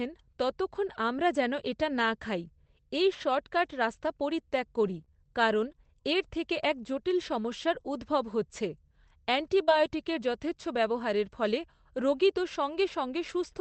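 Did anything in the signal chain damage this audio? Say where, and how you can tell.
Yes. Network stage: lost packet rebuilt from error correction at 3.65–3.71 s, after "এটা না খাই এই", and at 9.67–9.73 s, before "যথেচ্ছ ব্যবহারের ফলে রোগী". Each time, 40 ms was played from Opus's low-bitrate redundant copy, so there's no gap, but the sound turns briefly rougher and noisier.

Scattered short gaps between 4.81 and 5.76 s, from "রাস্তা পরিত্যাগ" to "এর থেকে এক জটিল". About three separate losses, the longest around 30 ms, were patched by continuing the last sound, leaving small ticks and smears.

Short concealed packet loss at 9.64–9.69 s: 40 ms arrived too late for the decoder. The receiver extended the preceding sound and blended back, producing a brief smear that runs into the start of the second error-correction rebuild.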